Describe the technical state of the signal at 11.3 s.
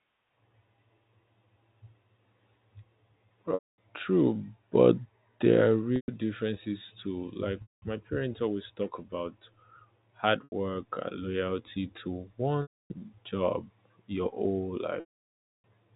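At 11.3 s the speech is intact, with no fault present, only the narrow, sub-4 kHz telephone band of G.711 telephone coding.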